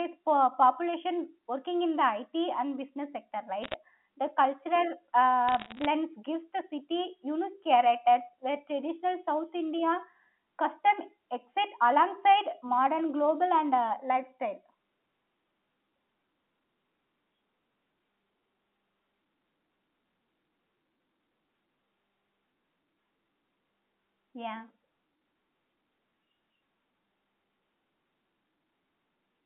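Bit errors on a digital phone line strike twice, from 3.62 to 3.74 s and again from 5.49 to 5.86 s. Flipped bits in the A-law samples each corrupt a single sample, so the speech underneath stays intact while sharp ticks and a rough crackle sit on top of it. The first burst is denser, with roughly 0.7 percent of bits hit, and the longer second burst is somewhat sparser, all within the 200 to 3400 Hz telephone band.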